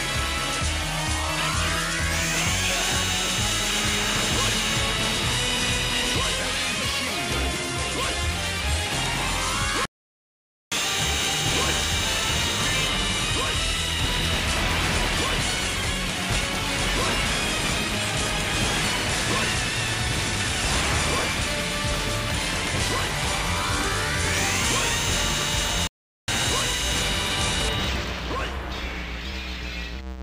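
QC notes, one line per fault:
9.85–10.72 s, playback stall: the sound halts for about 0.86 s, likely from the player starving for data, then resumes.
25.87–26.28 s, playback stall: a silence of about 0.41 s, likely a blocked playback thread, after which the audio continues.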